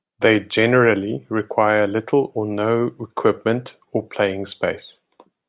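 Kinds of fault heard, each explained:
No faults heard in this recording.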